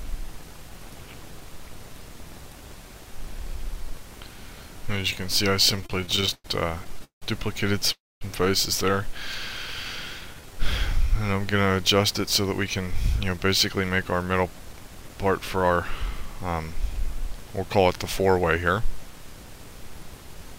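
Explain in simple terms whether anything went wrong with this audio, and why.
From 5.71 to 6.46 s and again from 6.84 to 7.24 s the audio keeps catching and stuttering. These are repeated stalls (stutter): late packets left the receiver briefly empty, so it stretched the last sound to cover each gap.

At 7.92 s the sound stops for about 0.3 s, mostly in silence, then carries on from 8.23 s. This is a call audio freeze, likely from packets held up on the way.

Between 10.22 and 11.14 s everything drags slightly, at about 93% speed. That is a jitter buffer slow-down, where the receiver repeated tiny pieces to rebuild its reserve.

From 13.06 to 15.78 s the audio feels hurried, at about 110% speed. That is a jitter buffer speed-up, where the receiver trimmed away roughly a third of a second to catch up.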